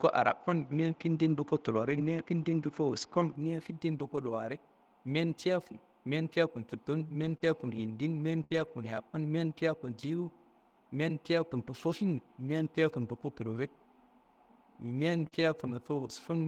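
From the start to 3.36 s, the sound is band-limited. Nothing reaches above about 7.4 kHz, so it sounds duller and a little boxy. A faint new noise floor sits about 45 dB below the signal. At 3.36 s the sound opens up again, with no silence at the change and no clear jump in level. The likely cause is an input switched to a poorer device, which was then switched back.

From 1.81 to 2.07 s comes the first lost packet rebuilt from error correction. For 140 ms the decoder plays low-bitrate copies carried in the following packets, covering seven lost packets. There is no gap. The sound just turns rougher and noisier for that stretch.

The same repair happens again from 7.21 to 7.35 s, for 80 ms. Right after, from 7.37 to 7.42 s, comes a short concealed packet loss. About 20 ms of audio never arrived in time. The receiver extended the previous sound for about 24 ms and then blended back, which leaves a brief smear. 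At 7.42 s there is one more rebuilt frame, 20 ms long, and it is rougher.

From 8.44 to 8.52 s there is a burst of packet loss. About 60 ms is missing. The receiver keeps the last sound going for about 63 ms and fades it, so it becomes a short held buzz or hiss. When the audio resumes, that part is gone. From 8.52 to 8.74 s, 120 ms of rebuilt frames follow, coarse and noisy.

From 15.28 to 15.33 s there is another short concealed loss. About 40 ms is missing, and the fill lasts about 35 ms, heard as a brief wobble. It overlaps a rebuilt stretch from 15.31 to 15.41 s, 60 ms of rougher, noisier sound.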